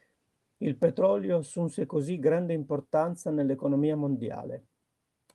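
Speech over a call link; nothing is wrong.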